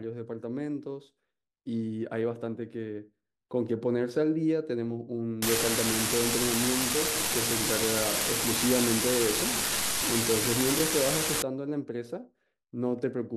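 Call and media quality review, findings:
Unreliable data bit, 5.42 to 11.42 s: steady crackle/fizz under the speech, continuing through pauses. Probable component: a marginal data line. One bit is wrong in random samples, and each error adds a fixed-size spike at about -16 dBFS.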